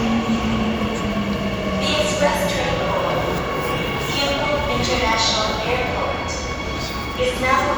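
Nothing goes wrong anywhere in this recording of sounds, so there's no technical fault to point to at any moment.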